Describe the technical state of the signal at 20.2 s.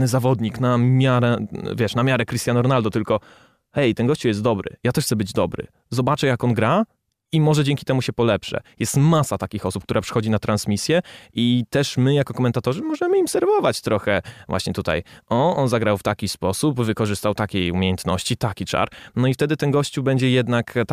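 At 20.2 s the speech signal is intact, with no audible technical fault at that moment.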